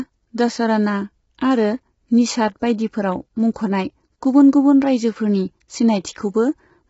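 Throughout, the speech sounds rough and grainy with nothing above 7.7 kHz, likely heavy low-delay AAC compression, consistent with AAC-ELD at around 16 kbps.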